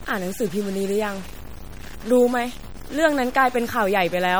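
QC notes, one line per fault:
Throughout: low bit depth without dither. The speech sounds like it was likely cut to about 6 bits by truncation, with no dither to break up the error. Because the rounding error tracks the signal itself, it turns into grit on quiet sounds, sitting roughly 20 dB under the speech, and quiet tails and pauses break up or sputter instead of decaying smoothly.
Throughout: MP3 compression, plainly audible. The sound points to a low rate of around 48 kbps. At that rate the encoder runs short of bits and drops weak frequency lines, which flicker in and out from frame to frame and leave a watery, swirling texture on the speech. It is likely the cause of the smeared consonant onsets as well, since coarse frequency blocks spread the coding error ahead of sharp attacks.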